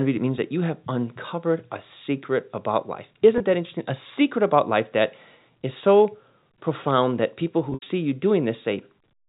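A brief buzzy hold at 3.38–3.40 s, then a longer fading stutter from 7.70 to 7.86 s, mark packet loss with pitch repetition. The receiver looped the last pitch period to bridge 20 ms, then 120 ms lost across 160 ms.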